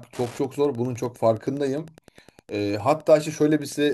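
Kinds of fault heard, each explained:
Wi-Fi interference: A faint, steady ticking runs under the speech for the whole clip, repeating about ten times a second and sitting roughly 30 dB below the voice. It comes from a Wi-Fi radio close to the audio circuitry. Each beacon the radio transmits, spaced 102.4 ms apart, is picked up and rectified by the circuit, so the radio's periodic bursts turn into audible clicks at that regular rate.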